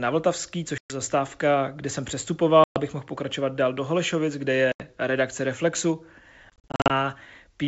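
Packet loss on an ADPCM call hits at 0.78, 2.64 and 4.72 s, with scattered dropouts from 6.50 to 6.91 s. Lost packets become hard-edged silences. The decoder's predictor and step size then drift from the sender's, so the wideband G.722 speech resumes slightly distorted before settling.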